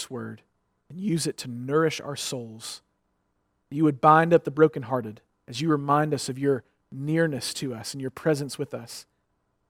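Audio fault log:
No fault can be heard anywhere in this speech recording. There is nothing to log for it.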